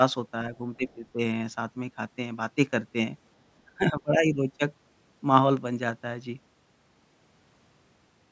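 Speech, with two stretches where the talker dips in broken pieces. From 0.77 to 1.19 s and from 3.66 to 4.59 s, the level drops by up to roughly 15 dB. This is likely speech suppressed in double talk. The echo canceller mistook the talker for loudspeaker echo and turned it down.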